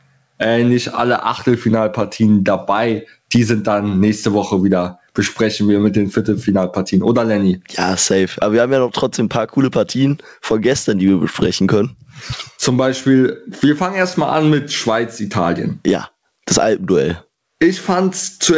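Gain pumping runs through the whole clip. The level swings by around 20 dB, so everything sounds squashed. The likely cause is input gain set far too high with a fast limiter clamping down. There's nothing above 8 kHz, which fits a wideband call codec such as G.722.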